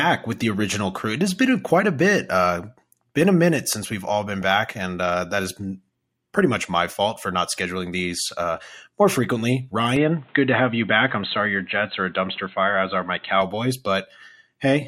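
Weak DAB reception let bit errors slip past the error correction into the MP2 audio data, producing DAB burbling from 4.27 to 4.58 s and again from 7.99 to 8.14 s. Corrupted samples put short blips of noise into single sub-bands, and corrupted scale factors make sub-bands jump in level for up to a frame, so the speech is overlaid with burbling blips. The first burst is the longer and denser of the two.

From 9.96 to 13.42 s the sound turns dull and narrow, with nothing above 4.1 kHz. A new background noise sits roughly 35 dB below the speech. The change comes in with no gap, and loudness stays the same. The likely cause is the input switched to a poorer device mid-recording, such as another microphone or a headset's call profile with its narrower band and its own noise. The full bandwidth returns at 13.42 s.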